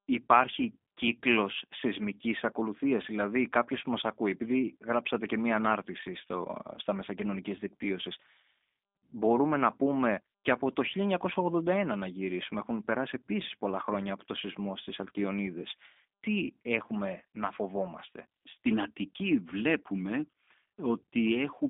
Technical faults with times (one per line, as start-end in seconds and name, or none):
0.00-21.69 G.729 codec